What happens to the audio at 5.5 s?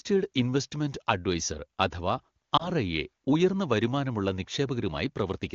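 Nothing goes wrong at 5.5 s: the speech there comes through intact, carried by the AMR wideband (HD Voice) codec at its top rate of 23.85 kbit/s, where any coding damage is faint at most.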